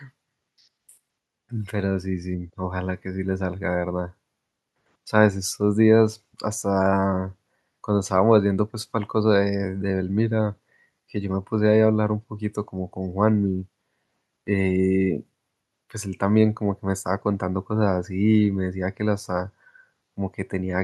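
No technical faults are audible.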